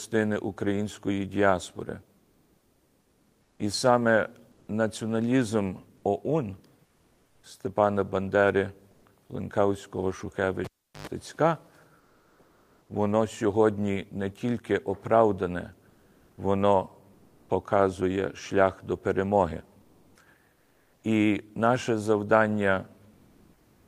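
The sender was likely using discontinuous transmission and stopped sending during pauses, so comfort noise in place of the background replaces the real room sound with steady, featureless hiss at 2.17–3.59, 4.51–4.67, 6.85–7.43, 11.99–12.89, 15.89–16.37, 17.13–17.49, 19.81–21.03 and 23.13 s to the end, mostly about 1–3 dB quieter but about 1 dB louder at 17.13 and about 3 dB louder at 23.13 s. At 10.64–11.07 s a live cable is pulled and plugged in again, giving a pop, about 0.38 s of near silence with a 0.1 s burst of 50 Hz mains buzz, then a second pop as the sound returns.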